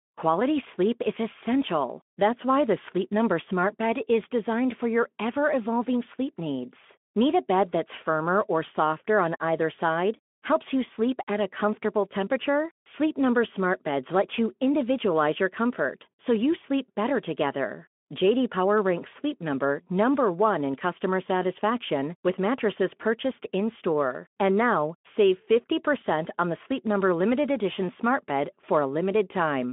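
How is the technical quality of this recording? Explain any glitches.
Listening closely, nothing in the recording stood out as a glitch; it carries the narrow, telephone-like band of a Speex call at about 15 kbps, with nothing above roughly 3.7 kHz.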